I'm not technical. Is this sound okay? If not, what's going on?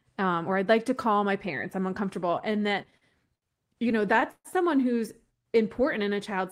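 No. The speech arrived over a network in small pieces, and some came late, so the player kept running out and had to wait. Each wait was filled by stretching the last bit of sound. These are repeated stalls, or stutter, between 2.39 and 3.44 seconds and again from 3.92 to 4.47 seconds. Nothing is lost, but the speech drags and stumbles, most in the second stretch, where one pause lasts about an eighth of a second.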